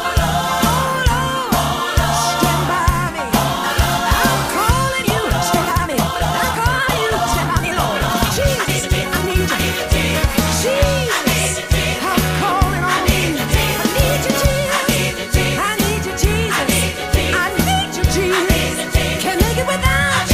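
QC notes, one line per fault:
5.00–9.70 s, time-stretched section: the pace abruptly doubles while pitch stays put, sounding rushed, likely from software squeezing this stretch by dropping short pieces.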